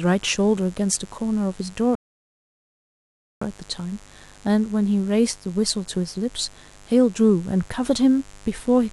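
Mains buzz runs under the whole of this speech recording, a steady raspy drone locked to the 50 Hz supply and sitting roughly 30 dB below the speech. Sharp switching spikes, from something like a dimmer, a rectifier or an unshielded cable, leak into the signal path twice per mains cycle, so the hum arrives as a rapid train of clicks at 100 per second. Its harmonics stack up well above the fundamental into the kHz range, which gives it an edgy texture rather than a smooth low hum. A rebuffering stall then interrupts playback from 1.95 s to 3.42 s. The player used up the audio it had downloaded and halted until more data came in, so the sound drops to silence for about 1.46 s and picks up exactly where it broke off. No speech is lost across the gap, but the pause adds that much time to the clip and breaks its natural pacing.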